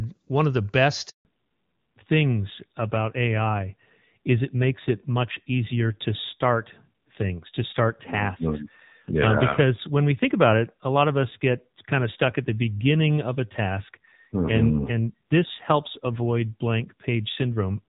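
Speech, and right after "one of the" it drops out completely for 160 ms, from 1.09 to 1.25 s, a handover gap where the call was switched between networks and no frames came through, so whatever was said in that stretch is just gone. The voice cuts away fast and sits in silence until the new link picks up. Before that point you get clean HD Voice, AMR-WB at what sounds like its top rate around 24 kbit/s, with barely any codec damage audible. From 1.25 s to the end, though, there's a fallback to narrowband. The call lands on the older AMR-NB codec at a low rate, about 7.4 kbit/s, and nothing above 4 kHz survives, so the airy top end disappears. The voice goes noticeably duller, boxier and a bit rougher for the remaining sixteen seconds or so.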